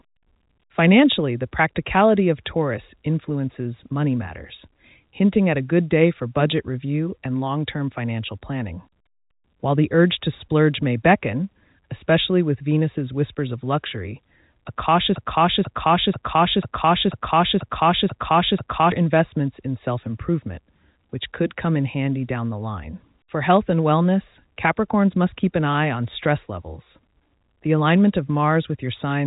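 After "whispers of luxury a", at 15.15 s, a broken-record loop begins. One 0.49 s fragment repeats exactly, back to back, eight times, until 18.92 s. The stream likely stalled and kept resending its last fragment. The audio for that span is lost. Playback resumes at "investments in self improvement".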